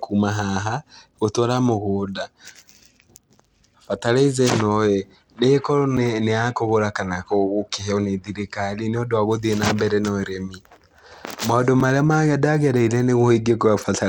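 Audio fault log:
throughout: Bluetooth SBC compression likely caused this. Treble flickers and drops out under gritty noise, which fits a coarse bit pool near 96 kbps; the spectrogram's upper bands look blotchy.
5.97 s and 11.80 s: block of digital silence, a 5.8 ms gap heard as a tick or dip. It fits an unfilled 256-sample buffer; the waveform goes flat.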